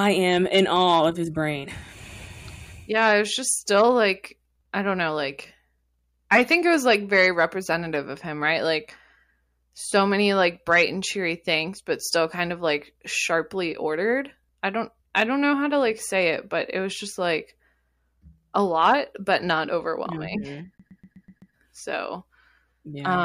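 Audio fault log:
20.78 to 21.53 s, CD stuck on one turn: a slice of speech about 0.13 s long plays six times in a row, each pass cut off by a brief mute before the same fragment starts again. A scratch is knocking the laser back one track at the same point on every revolution, so it keeps rereading the same short stretch. That is why the stutter is quick, evenly spaced and mechanical, the way a skipping CD sounds.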